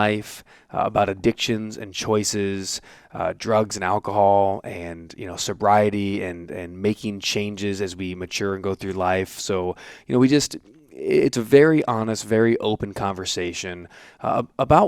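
No technical faults can be heard anywhere in the recording.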